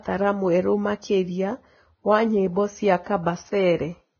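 Throughout the speech, nothing survives above 6.5 kHz, and the treble that remains is heavily damaged, turned grainy and hissy, with roughened tones and softened consonant attacks. This is most likely Vorbis compression at a very low rate, around 17 kbps. The codec drops the top band and quantises the upper residue so coarsely that fine detail turns into noise of similar energy. A simple low-pass filter would leave the remaining treble clean, not grainy.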